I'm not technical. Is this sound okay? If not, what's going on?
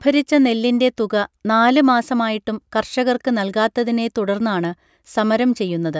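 Yes, this sound is okay, and there's nothing going wrong with it.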